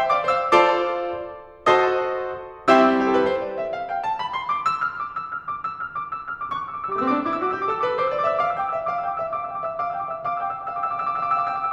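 No audible technical faults anywhere in the music.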